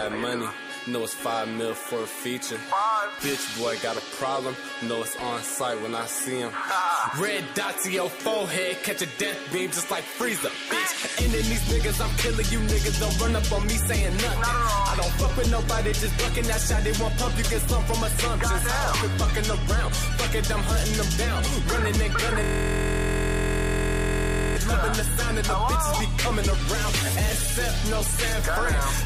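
A system hang loop runs from 22.44 to 24.56 s. The audio locks onto one fragment about 23.22 ms long and repeats it exactly, roughly ninety times. Because the loop is so short, it fuses into a steady buzz at about 43.1 Hz instead of a stutter. This happens when the computer or audio driver stalls while the sound hardware keeps replaying the last filled section of its ring buffer, and the length fits a 1024-sample buffer.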